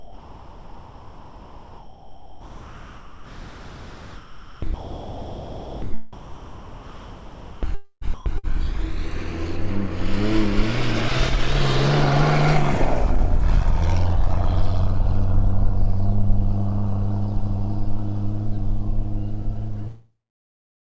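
From 0 to 5.82 s and again from 6.13 to 8.69 s the sound is chopped, most likely by the voice detector, with about 5.7 s and 1.9 s swapped for smooth comfort noise. Unlike packet-loss dropouts, the gaps hold steady synthetic hiss, not silence or clicks.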